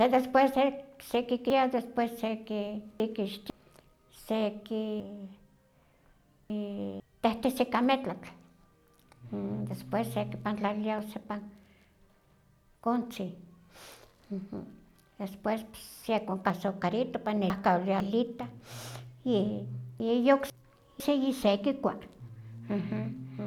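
Between 1.5 and 3.5 s, 5.0 and 7.0 s, 16.5 and 18.0 s, and 20.0 and 21.0 s, the speech has chunks out of order. A 500 ms block plays late, by three, three, two and one chunks respectively, after material that should follow it. Nothing is lost, but each passage sounds jumbled, with three hard joins. The second settles just before "tehtesi ika metlatl". The waveform shows abrupt steps at each join, and the spectrogram shows thin vertical broadband lines where formant tracks break and jump.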